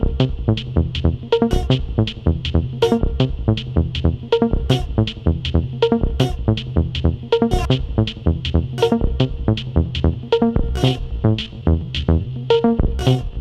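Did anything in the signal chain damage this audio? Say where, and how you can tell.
Yes. From 10.41 s to the end the audio turns into a time-stretched section, running at about 0.67 times its original pace while the pitch stays put. It drags, which likely comes from stretching software at the editing or playback stage that repeats short overlapping pieces to fill the extra length. On a spectrogram, harmonics hold their frequencies but events spread wider in time.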